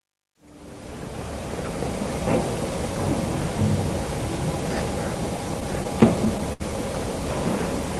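From about 5.49 to 6.62 s you get repeated stalls, a stutter: the jitter buffer ran dry nine times, and each time the last bit of sound was stretched to cover it, about 144 ms in all, the longest gap around 69 ms. Nothing's lost, but the audio drags and hiccups there, with the top end stopping near 12 kHz from the Opus call codec.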